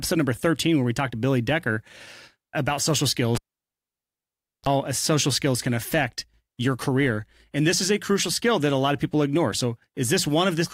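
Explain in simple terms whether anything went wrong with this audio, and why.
A cable was pulled and plugged in at 3.35 s: a pop, 1.3 seconds of near silence, a brief 50 Hz mains buzz, then another pop at 4.69 s.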